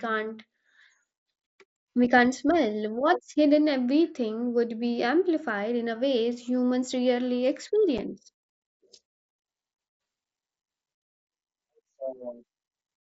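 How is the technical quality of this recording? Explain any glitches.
The recording carries one audible glitch, a brief dropout in the speech, heard over the slightly grainy, 8 kHz-limited sound of an mSBC wideband headset link.

At 7.98 s, just after "a ways humans rarely", there is unconcealed Bluetooth headset packet loss. A gap of about 7.5 ms, which fits a single lost mSBC frame, was filled with silence or an idle pattern instead of being patched over, so the sound drops out abruptly and can click at its edges. On a waveform this shows as a flat notch with sharp vertical edges; a spectrogram shows a thin, full-height blank stripe.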